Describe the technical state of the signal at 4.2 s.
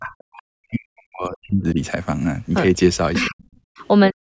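At 4.2 s the speech is being pulled down hard, from 4.1 s to the end at 4.22 s, dropping by roughly 40 dB. This is speech suppressed in double talk, likely an echo canceller failing to separate the near-end talker from the overlapping far-end echo and attenuating the near-end talker.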